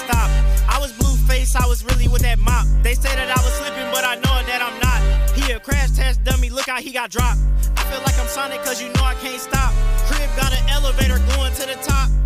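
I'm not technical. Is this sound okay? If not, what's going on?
No. There are four integer overflows: sharp, violent cracks at 0.13 s, 4.05 to 4.25 s, 7.77 s and 10.43 to 10.55 s. Loud moments overflowed the number range and wrapped to the opposite extreme.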